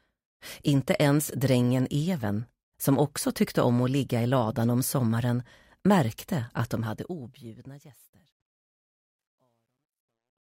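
From about 6.61 s the clip fades out, finishing at 10.5 s. Under it there's truncation distortion on the fade running right to the end at 10.52 s. The gain stage isn't keeping enough resolution and adds no dither, which fits a 12-bit path. So as the level drops, the waveform collapses into coarse steps. It's worst from 8.27 s onward, where the tail turns gritty.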